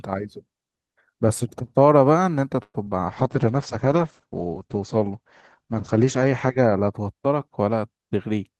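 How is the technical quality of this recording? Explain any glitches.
The recording has three call-related faults clustered between about 2.6 and 7.0 seconds, on a call path whose coding noise and top end near 12 kHz fit Opus at around 32 kbps.

Call audio freeze, 2.63 to 2.76 s: the sound stops advancing for about 106 ms. The receiver stretches the last sound into a fading buzz or hiss, then about 40 ms of near silence, before resuming where it stopped. The likely cause is packets delayed in transit so the jitter buffer ran dry. Nothing is lost, but the rest of the audio now runs roughly 106 ms later.

Short concealed packet loss, 2.84 to 2.89 s: about 20 ms of audio never reached the decoder in time. The receiver covers the hole with roughly 25 ms of synthesised continuation, extrapolated from the preceding sound, then crossfades back into the real signal. You hear it as a brief smear or wobble just after the freeze. 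A very short sound falling in that window could be dropped entirely.

Call bitrate drop, 3.08 to 6.99 s: the bandwidth estimate collapsed and the encoder was pushed to far fewer bits, which fits a fall from about 32 kbps to 10 kbps, held at the lowest rate for about 3.5 s. Opus codes more coarsely at that rate and narrows the audio band to 8 kHz. The sound turns rough, watery and muffled, losing its high end until the rate recovers near 7.0 s.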